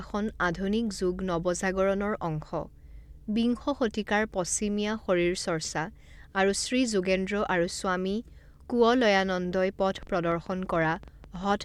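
A train of clicks runs from 9.95 s to 11.63 s, near the end of the speech. Around twenty sharp pulses arrive at an uneven pace averaging 11.4 per second, each with much the same short, hard shape and peaking at about the level of the speech itself. They are heard as ragged ticking laid over the talking, and in the gaps too. The cause is likely interference from nearby equipment or a faulty connection or power supply.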